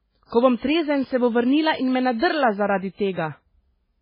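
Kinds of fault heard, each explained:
MP3 compression: The speech sounds watery and swirly throughout, with nothing above 5.3 kHz, likely from MP3 encoding at a very low bitrate near 16 kbps. On a spectrogram the treble stops at a flat ceiling, and weak frequency lines flicker on and off between frames.
Pre-echo: The codec spreads quantisation noise across each transform block, so the noise meant for a sharp attack leaks into the silence before it. Here a hiss of about 40 ms precedes attacks at 0.58 to 0.62 s and 3.13 to 3.17 s. A waveform shows low fuzz ahead of each onset.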